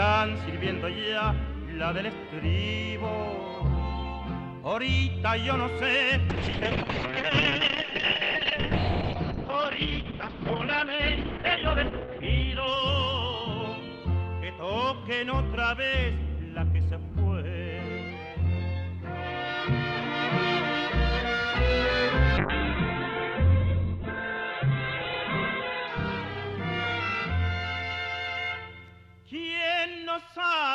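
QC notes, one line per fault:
6.31–14.73 s and 22.38–27.95 s: call bitrate drop. The encoder falls from 48 kbps to 6, then 7 kbps, so the sound turns coarse and muffled, with the top end cut to 6 kHz, then 4 kHz.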